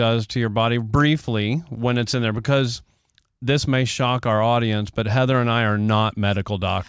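No technical faults are audible anywhere in this recording.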